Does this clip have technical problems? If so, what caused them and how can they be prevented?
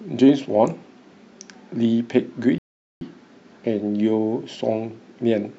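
Yes. A rebuffering stall interrupts the speech from 2.58 s to 3.01 s: playback used up its downloaded audio and paused until more data arrived. The sound drops to silence for about 0.43 s, then continues exactly where it left off, so nothing is lost and only time is added. A waveform shows a flat line across that span, and a spectrogram shows a clean empty vertical band. Larger playback buffers and adaptive bitrate switching help prevent such stalls.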